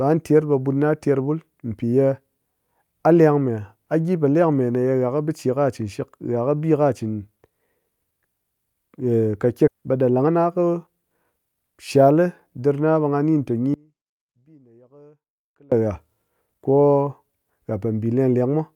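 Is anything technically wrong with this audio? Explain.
Yes, the speech has three faults.

At 9.67 s there is a skip ahead: about a second of audio was dropped while later audio was already queued, so playback jumps straight on with no filler. The waveform shows an abrupt splice with no gap, and the spectrogram shows speech patterns that don't connect across the cut.

From 9.77 to 11.55 s comes a jitter buffer speed-up. The receiver held too much audio and trimmed short pitch-period pieces repeatedly, removing about a fifth of a second. The speech runs at 113% speed but keeps its pitch. On a spectrogram the harmonics stay at the same height while syllables are compressed in time.

From 13.74 to 15.72 s, nearly two seconds, there is an audio dropout to a faint residue. The speech cuts out abruptly, leaving only faint sound about 30 dB below normal level. The likely cause is that the wanted signal was lost while the path after the break stayed live. 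The waveform collapses to a thin band and the spectrogram goes nearly dark, with sharp edges rather than a fade.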